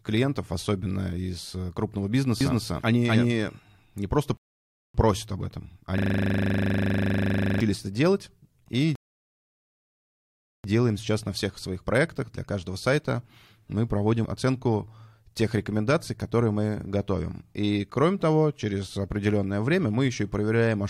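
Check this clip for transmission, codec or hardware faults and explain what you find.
There are three distinct faults here, all within the first eleven seconds of the clip: a doubled track, two playback stalls, and a hang loop.

From 2.41 to 3.59 s there's a doubled audio track: the speech is joined by a second copy running roughly a third of a second behind, at roughly the same level. It's a clean, full-range echo with no room tail, and it switches on and off abruptly. The likely cause is the signal being picked up twice, once through a slower path, so the late copy gets summed in.

There are two rebuffering stalls, at 4.37 to 4.94 s and 8.95 to 10.64 s. In each one the audio cuts dead to silence and then picks up exactly where it left off. The player ran dry of downloaded data and waited for more. Nothing is skipped, but the gaps add 0.57 s and 1.69 s to the timeline.

From 5.98 to 7.60 s there's a system hang loop. 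A 40 ms slice repeats 41 times while the host or driver is frozen and the audio hardware keeps replaying the same ring buffer. Because the slice is so short, it comes across as a rough, steady buzz at 25 Hz rather than a slow stutter, and then normal sound snaps back in.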